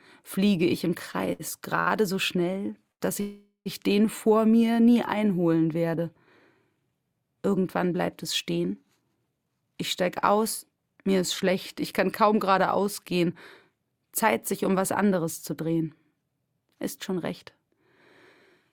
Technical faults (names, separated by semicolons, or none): repeated stalls (stutter); short stall from a late packet; call audio freeze; jitter buffer speed-up